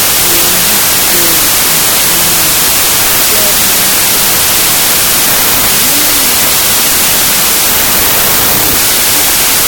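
From start to end, the audio has a wrong sample width fault. Data written as packed 24-bit integers is being read as 16-bit integers. Each three-byte sample gets split across two-byte reads, so most values mix bytes from neighbouring samples. Only some reads keep the top bits of the true signal. The result is loud, harsh noise with the original sound buried inside it. Playback runs at 0.667 times normal speed, so pitch drops by the same ratio, about a fifth lower.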